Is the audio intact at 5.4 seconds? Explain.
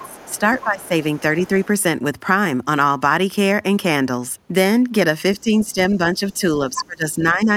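No. The other side's voice leaking through runs from 5.35 to 5.66 s, a faint second voice sitting about 30 dB under the main talker. It is likely caused by the far end playing from the talker's loudspeaker into the microphone, with the echo canceller failing to strip all of it out before sending, so a quiet residue of that voice slips through.

Speech suppressed in double talk starts at 5.41 s and lasts until 7.51 s. Across about a second in all within that span, the talker's voice sinks, by about 20 dB at its deepest, and thins out or breaks into pieces. The likely cause is both sides talking at once: the echo canceller cannot tell the near talker from the loudspeaker echo, so it turns everything down together, taking the wanted speech with it.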